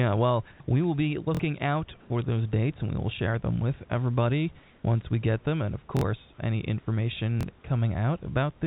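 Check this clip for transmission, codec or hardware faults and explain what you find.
Two kinds of fault come through: brief stretches where the background turns into a flat, featureless hiss, and three small stutters. The call path's band limit is audible too, with nothing above 4 kHz, as expected from G.711 mu-law at 64 kbps.

Comfort noise in place of the background, at 0.52 to 0.6 s, 2.0 to 2.1 s and 4.6 to 4.84 s: in these pauses the room's textured background gives way to smooth, uniform noise, about 4 dB quieter in the first, about 1 dB louder in the second and about 1 dB quieter in the third. The likely cause is discontinuous transmission: the sender stopped sending during the pauses, and the receiver substituted synthetic noise shaped to the background's rough spectrum.

Repeated buffer, at 1.35 to 1.39 s, 5.97 to 6.01 s and 7.41 to 7.43 s: each is a quick stutter with hard joins. 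The first two sound the same fragment twice more, and the last once more. The player ran dry and replayed its most recent chunk of about 23 ms, which fits a 1024-sample buffer. About 50 ms of real audio is lost at each of the first two, and about 20 ms at the third.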